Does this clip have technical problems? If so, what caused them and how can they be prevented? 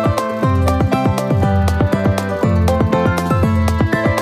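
Yes. Throughout, the audio is read two samples at a time, so it plays at double speed and a full octave high. The reader treats each pair of samples as one frame. To prevent it, declare the true channel count and sample width when reading.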